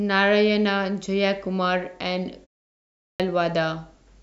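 Speech recording with a clipped start after a pause: following a 0.46 s silence, the output device has gone idle, so the first 0.36 s of sound, from 2.84 to 3.20 s, is lost and the audio resumes abruptly.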